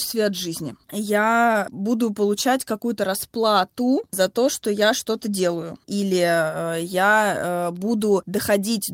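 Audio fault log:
Nothing to log here; no faults turn up anywhere in this bit of speech.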